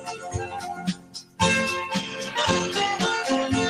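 The level pumps and thins throughout, with held material and decaying tails sinking while sharper onsets push through. That swing of around 15 dB comes from a noise suppressor applied to music or sounds: a processor built for speech is treating steady tonal content and ambience as background noise and pulling it down, so anything sustained keeps getting ducked. From 0.0 to 1.4 s the effect is at its worst. The sound is cut by the noise suppressor for about a second in total, dipping by up to about 15 dB, so sustained parts fade away and tails are clipped short instead of ringing out naturally. From 2.0 to 3.53 s the texture turns coarser and duller, with a rough, watery quality and less top-end sparkle. This is a call bitrate drop. The connection's bandwidth estimate fell, and the encoder went from 32 kbps to 17 kbps, staying near that lower rate for about 1.47 s. With fewer bits to work with, the codec quantises more crudely and trims the high frequencies, which produces the muffled, grainy sound until the rate climbs back.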